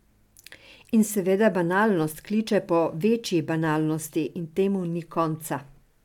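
No technical faults are audible anywhere in the recording.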